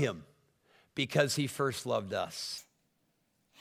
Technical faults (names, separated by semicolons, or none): wrong sample rate